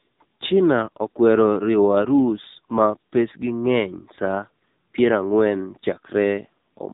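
AMR narrowband mobile codec damage runs through the whole clip, from start to finish. The speech has been squeezed through an 8 kHz mobile speech coder that rebuilds the voice from a vocal-tract model fed by sparse pulses, so nothing above about 3.8 kHz survives and the sound is dull and boxed-in. The damage is heavy, with a buzzy, synthetic edge that fits one of the codec's lower modes, around 6.7 kbps.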